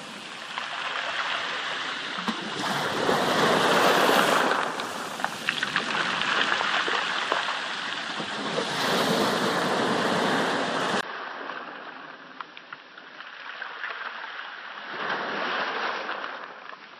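Input switched to a poorer device, from 11.01 s to the end at about 17 s. After a 20 ms gap, the sounds come back duller and boxier, with nothing above 5.8 kHz, roughly 10 dB quieter, and over a new faint background noise well below the signal. This likely means the recording input moved mid-take to a lower-grade microphone or a headset's call profile, whose narrower band, different gain and own noise floor replaced the original path.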